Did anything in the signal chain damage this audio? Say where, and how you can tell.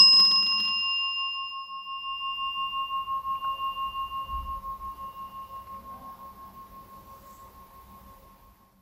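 Yes. Weak DAB reception let a few bit errors into the MP2 data, so DAB burbling appears at 3.45 s as brief noise blips in single sub-bands from corrupted samples, with about 9 frames hit at roughly 0.15% bit error rate.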